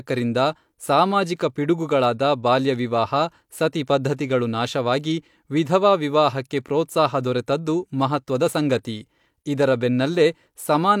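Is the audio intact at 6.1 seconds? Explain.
Yes, the audio is intact at 6.1 seconds, with no fault at that moment.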